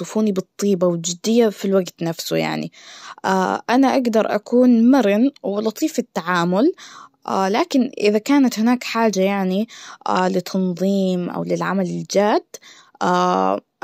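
No technical faults can be heard in the speech, so there are none to describe in time order.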